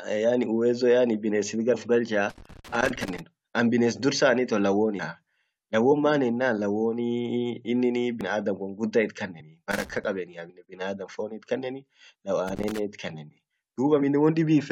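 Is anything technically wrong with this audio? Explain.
Yes, the speech has two kinds of fault.

Loose connector crackle at 2.30–3.20 s, 9.71–10.04 s and 12.48–12.79 s: a dirty contact making and breaking chops the signal, producing irregular scratchy crackle bursts.

Compressed frames skipped at 3.01–3.05 s, 4.98 s, 8.21 s, 9.39–9.42 s and 10.46–10.50 s: missing or rejected codec frames make the audio jump ahead by roughly 20 to 100 ms, heard as abrupt skips in the speech.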